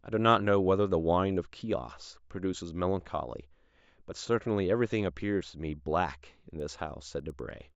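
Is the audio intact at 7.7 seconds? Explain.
No. From 6.4 seconds to the end of the clip, the speech passes through a resampler restarted on every block. Each 100 ms block is converted from 16 kHz to 48 kHz in isolation, so the filter lacks the true neighbouring samples at each edge and leaves a small error there. The result is a steady 10 Hz ticking riding on the speech. Unlike buffer underrun clicks, no sound goes missing, and the ticks stay evenly spaced and fade out whenever the speech pauses.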